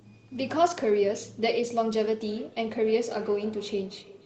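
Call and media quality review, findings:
Feedback echo between two devices, 2.29 s to end: repeats roughly every 0.3 s, about 17 dB down. Second device in the room replays it, and the canceller can't catch that.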